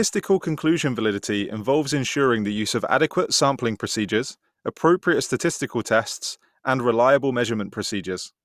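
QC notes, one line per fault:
No faults turned up anywhere in this one, so there's nothing to flag.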